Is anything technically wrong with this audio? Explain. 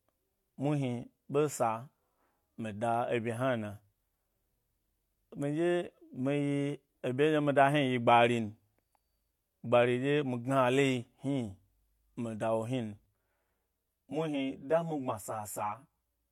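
Yes, there's channel delay (comb filtering) from 13.06 s to the end: one channel runs around 10 ms late before the mono sum, cutting notches from about 50 Hz up, spaced every 100 Hz or so, giving a hollow, phasey, almost doubled sound.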